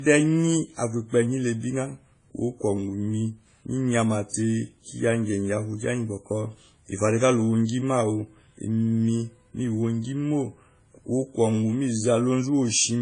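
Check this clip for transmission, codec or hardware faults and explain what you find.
One fault runs the whole way through: the speech has nothing above 10 kHz and carries two different kinds of compression artefacts stacked on each other. That's most likely transcoding between lossy codecs, consistent with a low-rate WMA encode later re-encoded to AAC-LC, which keeps the old damage and adds its own.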